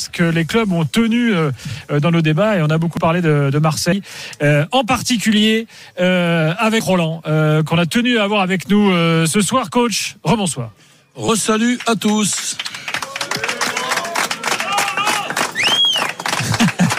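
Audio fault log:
2.97, 3.92, 6.80, 11.29 and 14.05 s: dropped buffer (overrun), likely. Each is an abrupt jump forward with no gap. About 20 ms is lost at 2.97 and 14.05 s, and about 70 ms at the other three, where the audio on either side of the missing stretch is butted together.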